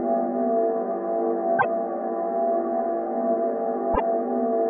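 A brief glitch cuts through the sound from 1.56 to 1.65 s, and a second one follows from 3.91 to 4.0 s, each lasting roughly a tenth of a second. Both come from damaged data in a compressed stream: bytes in those stretches were lost or corrupted, so the decoder misread the affected frames, lost sync, and produced garbled output while hunting for the next valid frame header before normal decoding resumed.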